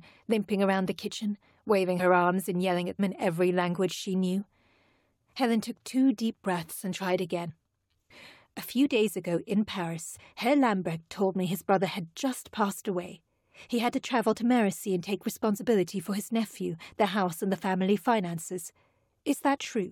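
Speech with compressed frames skipped at 1.99, 2.98, 7.49 (after "deep breaths and tried"), 10.11 (after "few days ago in"), 15.57 (between "and take" and "for his nephew the") and 19.54 s. Each time the decoder drops whole frames, jumping roughly 50 to 100 ms ahead. A spectrogram shows brief vertical discontinuities where harmonics shift abruptly, and the waveform shows a small envelope step.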